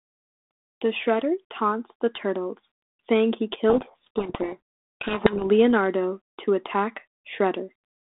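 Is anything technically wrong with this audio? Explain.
Yes. From 3.70 to 5.53 s there is a codec payload misread. The G.726 code words arrive with their bit order reversed, so the decoder rebuilds wrong differences. The speech is buried in harsh distortion. The telephone band of 300 to 3600 Hz, with light coding noise, fits 32 kbit/s G.726.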